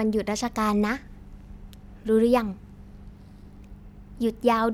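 No technical faults can be heard anywhere in this recording of speech.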